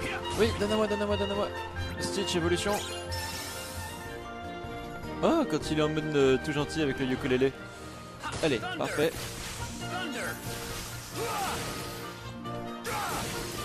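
At 5.04 s and again at 9.03 s there's a tiny skip where the audio jumps ahead, a classic overlap between stream segments. Neighbouring 4-second segments claimed overlapping time stamps, so the player trimmed a sliver of sound that wasn't actually duplicated, leaving a waveform discontinuity.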